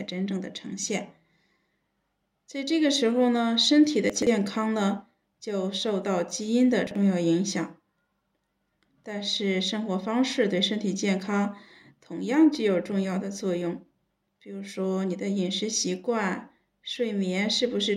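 Chunks out of order at 4.10–4.27 s and 6.87–6.96 s: a 43 ms block plays three, then one, block late, giving jumbled audio.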